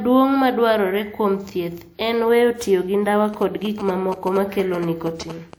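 From 3.34 s to 5.54 s, just after "weyo tiyo gi ndawa", GSM signalling bursts break in: a nearby 2G phone transmitting short groups of radio pulses, which the audio circuitry rectifies into sound. It comes through as a galloping dit-dit-dit of brief buzzes at about 217 Hz, roughly 10 dB below the speech. Unlike the steady drone of mains hum, or of a phone mid-call, it stutters in irregular clusters.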